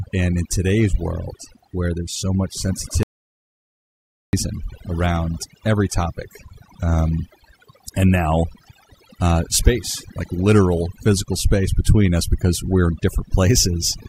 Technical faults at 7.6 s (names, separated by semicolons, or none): overdone noise removal